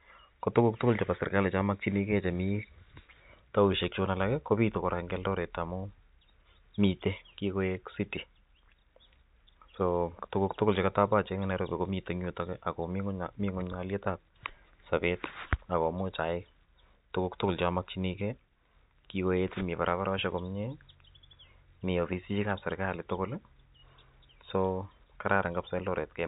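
Nothing goes wrong anywhere in this stretch of speech, which simply carries the narrow phone-line character of G.711 telephone coding, with nothing above 3.8 kHz.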